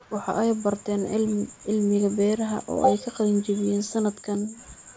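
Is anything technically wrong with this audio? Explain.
No, there's nothing technically wrong here; the speech has simply gone through a call's microphone processing, so nothing reaches above 8 kHz and the lowest bass is trimmed away, which is just how that path normally sounds.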